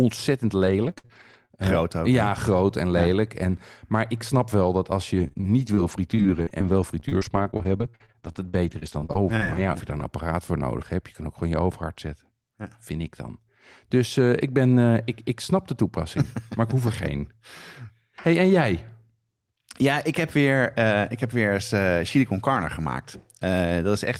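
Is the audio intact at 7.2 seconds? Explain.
No. At 7.2 seconds the clip sits inside a stretch of repeated packet loss (robotic sound) from 5.16 to 10.02 seconds, starting just after "snap wel dat als". There are 32 gaps, the longest 47 ms. Each is patched by extending the last sound. About 16% of the span is concealed. The result is choppy speech with pieces missing.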